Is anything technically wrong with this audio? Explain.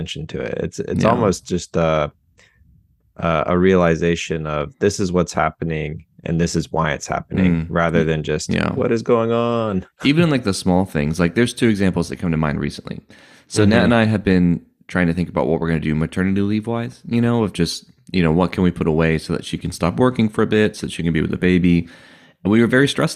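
No, nothing technically wrong.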